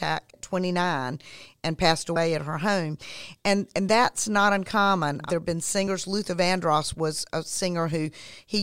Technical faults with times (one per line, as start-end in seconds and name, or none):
0.33 compressed frames skipped
2.16 compressed frames skipped
3.89 compressed frames skipped
5.87 compressed frames skipped